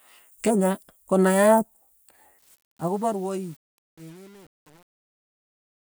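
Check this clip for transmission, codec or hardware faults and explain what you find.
One fault is audible, and it sits on the speech's closing fade.

Truncation distortion on a fade runs from 2.39 s to the end at 5.96 s, worst from 2.82 s onward. The fade-out starts around 2.4 seconds, and the gain stage drops the low-order bits without dither, which fits a fade computed at 8-bit resolution. As the speech shrinks toward the smallest step, the waveform collapses into a few square levels. The tail turns gritty and buzzy.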